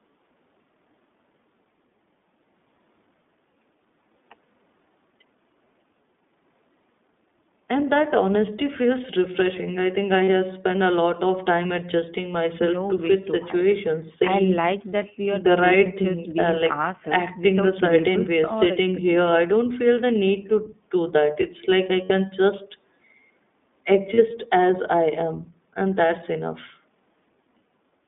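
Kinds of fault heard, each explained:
iLBC codec: The speech is confined to a narrow telephone band, roughly 200 Hz to 3.6 kHz, with a plainly audible rough, slightly synthetic texture that fits the 15.2 kbps mode. Unlike a simple band-limited line, the voice carries this coded, buzzy graininess throughout.
lost iLBC frames: At 10.24 to 10.30 s, 22.04 to 22.12 s and 24.14 to 24.20 s, the speech briefly turns into a held, buzzy vowel-like tone, which fits two or three missing 20 ms frames each time. Unlike a dropout, the gap isn't silent, and the voice recovers almost instantly.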